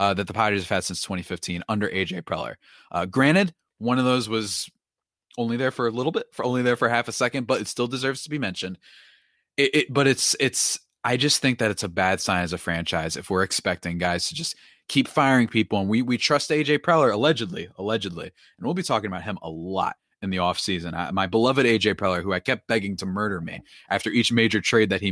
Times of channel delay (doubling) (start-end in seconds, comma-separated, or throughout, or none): none